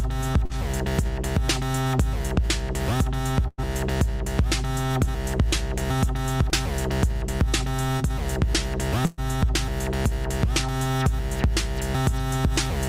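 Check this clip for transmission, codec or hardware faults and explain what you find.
Two kinds of network fault occur: three brief patches of short concealed packet loss and two longer bursts of packet loss.

Short concealed packet loss occurs at 0.45 to 0.52 s, 6.50 to 6.54 s and 7.97 to 8.02 s. Each is a quick smear or wobble, as if the sound briefly stuttered on itself. The decoder never received a short stretch of audio, about 40 ms in the first case and about 20 ms in the others. It filled the hole by extending the preceding sound for 42, 17 and 23 ms, then blended back into the real signal.

Bursts of packet loss occur at 3.48 to 3.60 s and 9.06 to 9.20 s. Each sounds like a held, fading buzz or hiss, after which the sound resumes slightly further along than expected. About 100 ms went missing in the first burst and about 120 ms in the second. The receiver continued the last sound for 102 and 118 ms while letting it decay. 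In the first burst that extension trailed into a 10 ms silence before the audio returned. The real content of those gaps is lost.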